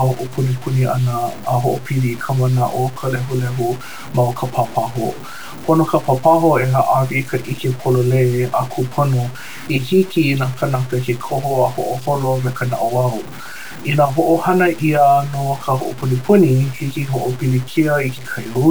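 Throughout the speech, the samples were likely truncated to 6 bits with no dither, which is low bit depth without dither. The error follows the speech, so quiet stretches turn gritty and grainy, with distortion only about 20 dB below the signal.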